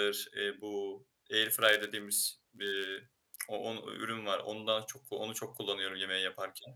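From 1.42 s to 3.11 s, right after "eee bu" and up to "o on ü ürün", a block size mismatch (padded) puts a short silent gap into every block, because the sending stage fills too little of each block the receiver reads. The result is a buzz at 91.5 Hz, and the speech runs slightly slow, at 0.996 times normal speed, with its timbre unchanged. That unchanged timbre separates it from a sample-rate error. Unlike dropped blocks, nothing is skipped.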